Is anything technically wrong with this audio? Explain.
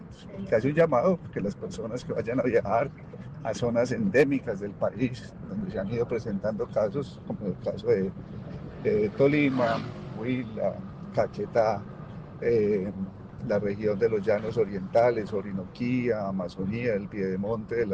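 No, nothing technically wrong can be heard in this audio. There are no dropouts, glitches or other playback faults anywhere in it.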